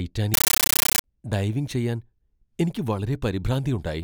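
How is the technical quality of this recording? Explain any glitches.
The recording has one clear glitch near the start. From 0.34 to 1.04 s, just before "ഡൈവിംഗ് ചെയ്യാൻ", the speech is replaced by a compressed stream played as audio. An AC-3 bitstream, probably around 640 kbps judging by how dense the bursts are, got passed along as if it were plain PCM without being decoded. Each frame comes out as a 13.3 ms blast of noise followed by silent padding, repeating 31.25 times a second, so you hear a harsh, very loud, chattering static.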